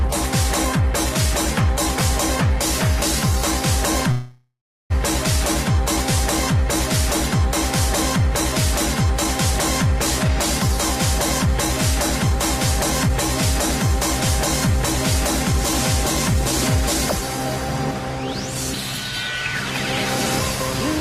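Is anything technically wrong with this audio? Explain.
Yes, there are two kinds of fault.

A call audio freeze runs from 4.11 to 4.92 s, likely from packets stalling in transit until the jitter buffer emptied. The last sound is stretched into a fading buzz that ends in about 360 ms of silence, then resumes where it stopped, now about 786 ms late.

Jitter buffer speed-up occurs at 10.28–10.69 s and 13.07–13.11 s. With excess audio queued, the receiver cut short pitch-period pieces, around 40 ms and 50 ms in total. Pitch holds but pace jumps, to 108% and then a sharp 248%.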